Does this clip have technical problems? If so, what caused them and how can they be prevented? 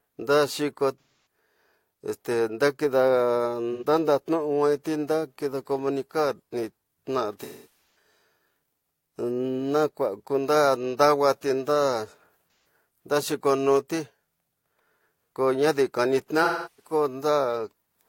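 Yes. The speech has AAC frame loss with concealment at 1.00–1.20 s, 3.73–3.85 s, 7.41–7.67 s, 12.48–12.65 s and 16.44–16.93 s. The decoder filled each gap from the last good spectrum, so these patches are filled with smeared, noisy or phasey sound instead of dropping to the hard silence of a plain dropout. The longest, at 7.41 s, points to a run of about a dozen lost frames. A more reliable link with forward error correction or retransmission would prevent it.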